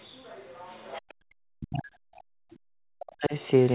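A faint second voice sits under the clip from 0.00 to 0.05 s, very low against the speech, and returns more clearly from 0.72 to 1.01 s at roughly 30 dB below the talker. It sits on a narrowband line whose content stops at about 4 kHz. This is likely the other side's voice leaking through: far-end audio played on the talker's loudspeaker, picked up again by the microphone and not fully removed by the echo canceller.

Immediately after that leak ends, from 1.01 to 1.28 s, the room sound collapses, falling by about 40 dB at its deepest for roughly a third of a second before returning. This is background gated by the echo canceller. Having just detected loudspeaker activity, the canceller clamped the microphone hard, and the ambience drops out until the suppression releases.

From 1.56 to 3.35 s the talker's own voice is repeatedly pulled down, in places by around 40 dB. It dips, loses its upper range and breaks into fragments across roughly two seconds of affected audio. 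The pattern points to speech suppressed in double talk, with the likely cause being both ends talking at once. Unable to separate the near-end voice from the loudspeaker echo, the canceller attenuated everything in the microphone signal while the far end was active.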